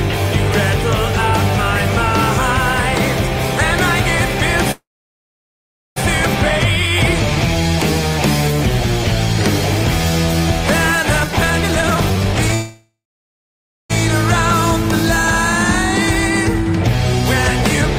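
At 4.71 s there's a call audio freeze lasting to 5.98 s: a brief fading tail, then about 1.1 s of silence, likely packets stalling and the jitter buffer running dry. The audio picks up where it left off. From 11.19 to 12.54 s a jitter buffer speed-up plays things at 153% with unchanged pitch, trimming roughly 0.7 s of backlog, so it sounds hurried. A second freeze follows right after, 12.54 to 13.92 s, with about 0.9 s of silence before the audio resumes.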